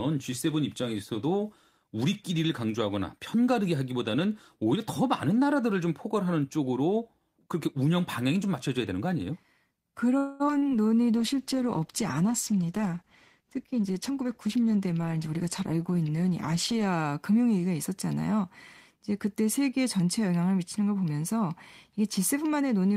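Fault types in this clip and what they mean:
call audio freeze: at 10.17 to 10.42 s the last sound is drawn out for 224 ms, likely from late packets draining the jitter buffer, then resumes intact.
short concealed packet loss: around 10.46 to 10.50 s and 10.58 to 10.64 s, 40 ms and 40 ms of audio never arrived and were partly bridged by extrapolated sound.
jitter buffer slow-down: from 10.64 to 10.89 s the receiver repeated pitch periods, adding 47 ms, so the sound runs at 84% speed with unchanged pitch.
call bitrate drop: from 11.18 to 16.94 s the encoder falls from 32 to 13 kbps, making the sound coarser and duller until the rate recovers.
jitter buffer speed-up: from 13.75 to 15.37 s the receiver cut short pitch-period pieces, about a fifth of a second overall, so the sound runs hurried at 113% speed.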